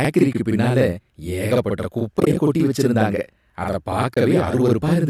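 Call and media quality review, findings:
Channel delay (doubling), whole clip: a second copy of the speech trails about 46 ms behind at the same level, giving a slap-like double. One channel arrives late, which fits a 2048-sample buffer offset, and then both are summed to mono.

AAC frame loss with muting at 0.33 s (20 ms), 2.17–2.37 s (about 90 ms lost in short holes spread over 200 ms, just before "கொட்டி வச்சிருந்தாங்க அத") and 4.14–4.17 s (30 ms, right after "கொட்டி வச்சிருந்தாங்க அத"). These are soft fade-out/fade-in gaps. The decoder zeroes dropped frames, likely in the low-delay AAC path.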